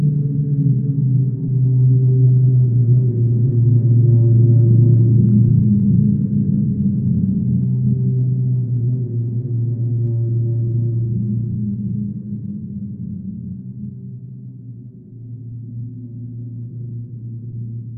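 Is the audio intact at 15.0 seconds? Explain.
No. At 15.0 s, as across the whole clip, a block size mismatch (truncated) is present: one stage writes longer blocks than the next reads, which fits 1024-sample blocks, and each block's tail is discarded. That chopping puts a 43.1 Hz buzz over the sound.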